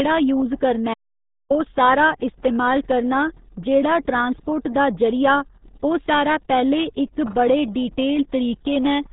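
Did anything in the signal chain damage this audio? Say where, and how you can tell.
Yes. The damage happened at the codec stage, and it lasts the whole clip. The speech is muffled and gargly from start to finish. Nothing above about 3.8 kHz survives, so sibilants and consonant detail are gone. This is the RealAudio 14.4 codec, RealAudio 1. It discards most of the signal and rebuilds speech from a coarse model, which leaves heavy artefacts. The sound fits an 8 kbit/s dial-up stream.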